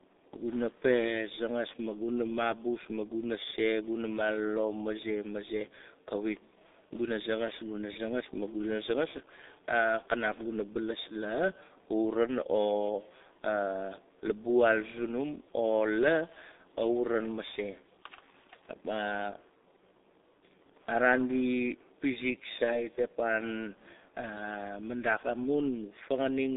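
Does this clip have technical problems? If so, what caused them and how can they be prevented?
Yes. The whole speech clip carries G.723.1 codec damage: the sound is confined to roughly 250 Hz to 3.7 kHz and is heavily muffled and hoarse, which points to a bitrate of about 6.3 kbit/s. Unlike simple band-limiting, consonants blur because the coarse 30 ms frames update the voice model slowly. Use a wideband, higher-rate codec to prevent this.

From 22.64 to 22.83 s, just after "araan di pizik", VoIP packet loss concealed by the speech codec turns the voice into a fading stretched sound, which fits one lost 30 ms frame. A plain dropout would leave silence, but here the decoder extrapolated the last pitch and kept the voice weak for a moment after the gap. A jitter buffer and forward error correction prevent this.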